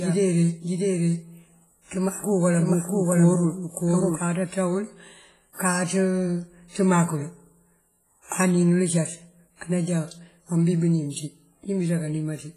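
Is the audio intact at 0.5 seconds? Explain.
No. At 0.5 seconds a doubled audio track is sounding. It is already under way when the clip opens and runs until 4.24 s. A second full-band copy of the speech trails the original by about 0.7 s at roughly the same loudness, with no decay or room colouring. This is likely from the same audio being captured again through a slower path, or from an edit leaving two copies out of step. The echo stops abruptly at 4.24 s.

The same moment also carries heavy WMA compression, which runs through the whole clip. This transform codec uses long blocks, so its quantisation noise smears over tens of milliseconds, and quiet spectral lines are dropped entirely. The result is a ringing, washy sound with hiss that swells and fades with the speech, and nothing above 15.4 kHz. The damage likely comes from a low bitrate, consistent with about 24 kbps.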